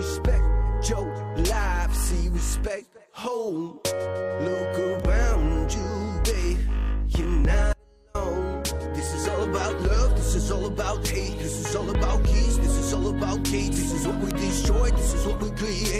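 Three bit error spikes tick through the audio, at 5.00 s, 9.07 s and 14.31 s, each a single sharp click with no link to the material. The first two are single samples, and the last spans two in a row. Each one is a flipped bit throwing a sample value off by a power of two for an instant. Between 7.73 s and 8.15 s there's an audio dropout to a faint residue: for about 413 ms the sound cuts out abruptly and only a faint leak of it remains, roughly 35 dB down. That's likely the wanted signal being lost upstream while the rest of the chain stayed live.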